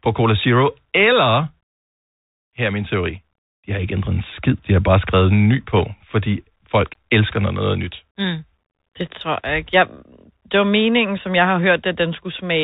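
A speech recording carried over a Bluetooth CVSD headset codec for its whole length. CVSD encodes one bit per sample, each bit simply telling the decoder to step up or down, and that step size adapts, which fits a 64 kbps stream. The band stops hard near 4 kHz, so a spectrogram shows a flat ceiling with nothing above it. Sibilants sound scratchy, loud bright syllables smear where the step cannot keep up, and a fine granular hiss lies under the speech. Between "bare skrevet en ny" and "fordi folk elsker noget", from 5.77 to 5.81 s, there are bit errors on the Bluetooth voice link. Flipped bits, at a rate somewhere under one percent, turn into a brief rushing crackle rather than sharp clicks, because every bit moves the signal by only one small step and the error fades quickly. On the waveform this appears as a short burst of roughness with no tall spikes, and on the spectrogram as a broadband smudge lasting about 40 ms, still held below the 4 kHz limit.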